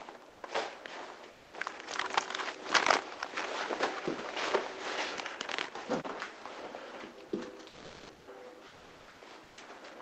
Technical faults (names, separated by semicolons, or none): comfort noise in place of the background; sound dropped by the voice detector